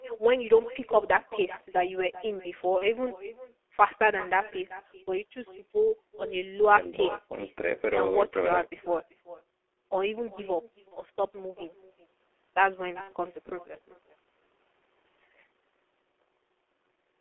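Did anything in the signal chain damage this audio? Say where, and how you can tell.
Yes. The first problem is an echo with no canceller, introduced at the far end's call processing and carried back over the network. Every phrase is followed by a quieter, thinner copy about 17 dB down and roughly 0.4 s late. The far end's loudspeaker feeds its microphone, and nothing subtracts that path. Room reverb smears the tail continuously, but this copy is a distinct repeat trailing each phrase at a fixed delay.

The second problem is codec damage from G.723.1 at 6.3 kbit/s, and it runs through the whole clip. The band stops at 300 Hz and 3.4 kHz, so the speech sounds muffled, hoarse and boxy, with smeared consonants. The codec works in 30 ms frames and updates its voice model slowly, so fast transitions get blurred. Plain band-limiting would only dull the sound, but here the texture itself is rough and hoarse.

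The third problem is VoIP packet loss concealed by the speech codec, which occurs at the network stage. It can be heard at 2.78–2.90 s, at 5.07 s, at 10.88–10.95 s and at 13.01–13.10 s. Each time, the sound is briefly stretched into a fading buzz or coloured noise instead of going silent. The first three fit a single lost 30 ms frame, and the last fits about 60 ms lost. The decoder extrapolates from its last frame, so the sound stays weak for a short while after packets return.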